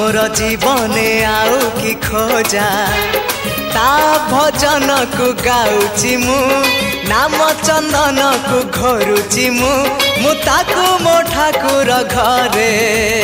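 From 0.38 s to 6.28 s there is video or display buzz: a screen or video cable couples into the audio, giving a 50 Hz field-rate buzz with hash above it and a thin 15.6 kHz line tone, roughly 25 dB below the sound. A spectrogram shows harmonic stripes plus a steady high line.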